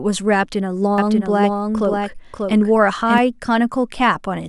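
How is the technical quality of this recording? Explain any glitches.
There's one glitch: a doubled audio track from 0.98 to 3.18 s. A second copy of the speech runs about half a second behind, a few dB quieter, with no room tail, cutting in and out abruptly. It's likely a second, slower capture path mixed in.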